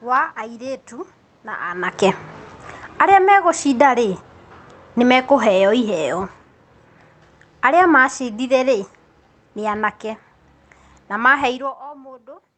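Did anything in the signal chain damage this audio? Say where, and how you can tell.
Yes. The damage is in call processing: automatic gain falling. Level drops by about 14 dB from 2.85 to 3.32 s, then about 4 dB over 4.95 to 6.35 s and 7.49 to 9.95 s. The room noise sinks with the speech. That shows a gain stage turning down.

Automatic gain rising follows from 3.23 to 5.47 s. Speech and background swell together by about 6 dB over two seconds. A talker moving would change only the speech level. Here the gain control is pushing the whole signal back up after finding the input too quiet.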